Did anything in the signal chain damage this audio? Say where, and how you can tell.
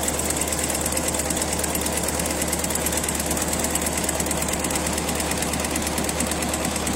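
No, there's no audible damage from any stage of the chain.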